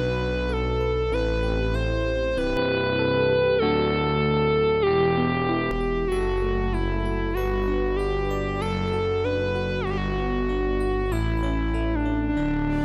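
From 2.57 to 5.71 s the sound dulls with nothing above 4.9 kHz, but unlike plain filtering it brings faint new background noise and a level jump. That points to a likely input switched to a poorer device.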